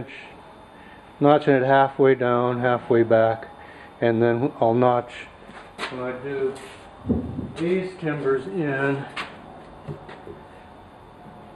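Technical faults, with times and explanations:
Throughout, channel delay (comb filtering): one channel arrives a few samples late, around a tenth of a millisecond, so summing to mono cancels shared content near 5 kHz and its odd multiples, leaving a hollow, phasey sound; a spectrogram shows fixed horizontal notch bands.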